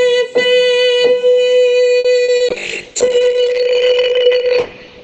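Around 1.99 s a sound is briefly held too long, with a faint buzz or dip across roughly 1.99 to 2.07 s, after which the audio picks up exactly where it left off. This is a short stall from a late packet. The packet was not there when it was due, so the jitter buffer ran dry, and the receiver stretched the last sound by about 50 ms until the packet arrived. Nothing was lost, but playback now runs about 50 ms later than before. Just after this come two quick smeared wobbles, at 2.24 to 2.31 s and 2.36 to 2.43 s. These are short concealed packet losses. About 40 ms of audio never reached the decoder in each case, and the receiver covered each hole by extending the preceding sound before blending back into the real signal. From 2.5 s to the end the sound turns rough and watery, and the top end collapses so that everything above about 6 kHz is missing where the audio earlier reached up to 20 kHz. 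This is a call bitrate drop. The connection's bandwidth estimate fell, and the encoder was pushed from a high rate down to a very low one, consistent with roughly 96 kbps falling to about 6 kbps. The coarse coding and narrowed band remain at their worst for about 1.8 s.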